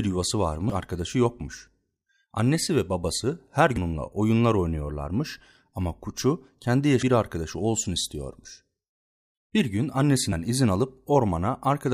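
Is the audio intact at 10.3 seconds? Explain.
No. At 10.31 s the speech is hit by damaged data in a compressed stream: corrupted bytes make the decoder misread frames and resync, producing a brief chirp, squawk, click or short hole. A spectrogram shows a thin broadband smear; the waveform shows a jagged discontinuity.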